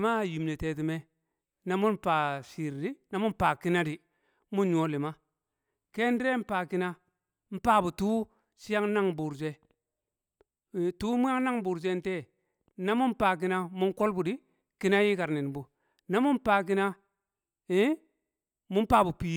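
No technical faults can be heard anywhere in the recording; the signal stays continuous and steady throughout.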